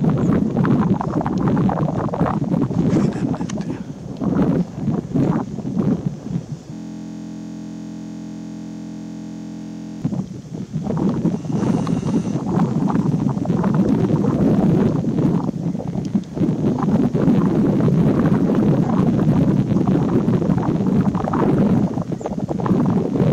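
From 6.74 s to 10.02 s, a system hang loop: the host stalled while the audio hardware kept replaying its ring buffer. A 23.22 ms segment, which fits a 1024-sample buffer, repeats about 140 times, producing a steady 43.1 Hz buzz.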